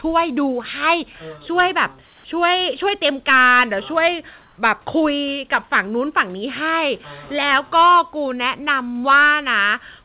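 Hard clipping runs through the whole clip: the speech was driven about 9 dB past what a stage could pass, so a small fraction of peaks are cut flat, adding crackle. Comfort noise in place of the background appears from 2.06 to 2.24 s and from 4.42 to 4.58 s, where the natural room noise gives way to a steady, featureless hiss, about 3 dB quieter in the first gap and at the same level in the second. The likely cause is discontinuous transmission, with the receiver filling the pauses with synthetic noise. The audio carries nothing above 4 kHz, which fits a G.711 call codec.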